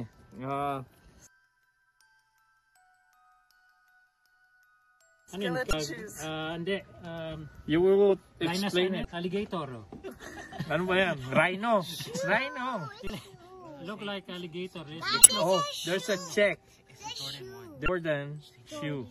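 Damaged data in a compressed stream causes brief blips at 5.70–5.73, 9.02–9.05, 13.06–13.10, 15.21–15.29 and 17.85–17.89 s, where corrupted frames are misdecoded and the decoder loses sync.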